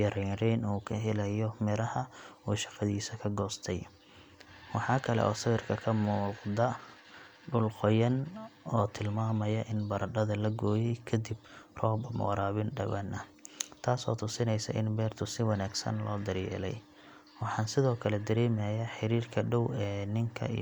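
Listening to the speech in this clip, nothing stood out as a technical problem at any point.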